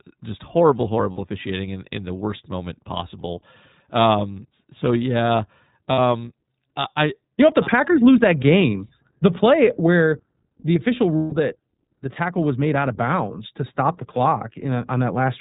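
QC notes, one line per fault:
Throughout, iLBC codec: nothing above 4 kHz, a flat spectrogram ceiling; speech is plainly rough and synthetic, which fits 15.2 kbps with 20 ms frames.
1.12–1.19 s, 5.92–5.99 s, 11.16–11.34 s, lost iLBC frames: gaps of 60, 60 and 160 ms are filled by a repeated pitch cycle with noise, heard as a held buzzy vowel. The spectrogram shows frozen, smeared harmonics, and the waveform shows periodic cycles fading across the longer gap. The voice is right again almost at once afterwards.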